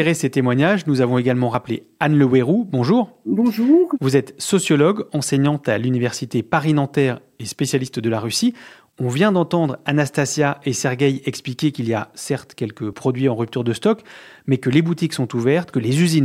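At 1.54 s, after "témoignages nous avons également", and at 12.93 s, between "y a certes quelques" and "en rupture de stock", the speech jumps, each likely a dropped buffer (overrun) losing about 20 ms. The waveform shows an abrupt discontinuity, and the spectrogram a thin vertical broadband line.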